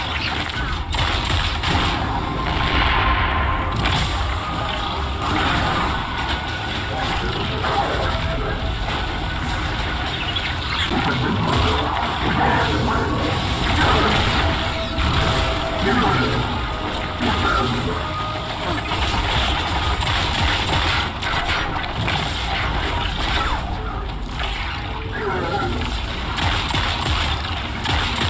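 Nothing stood out as a technical problem on listening to this recording.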